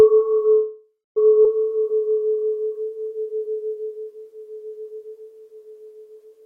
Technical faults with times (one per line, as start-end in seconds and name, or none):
0.53-1.18 call audio freeze
1.44-1.46 skip ahead
1.69-4.13 jitter buffer slow-down